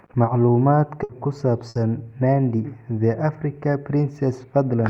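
At 1.03 s and again at 1.69 s the speech hits a burst of packet loss, each lasting about 90 ms. In both places the receiver had nothing to play, so it stretched the last received sound for 60 ms and let it decay, which is heard as a brief held, fading tail. Playback then picks up further along, and roughly 60 ms of the original speech is skipped each time.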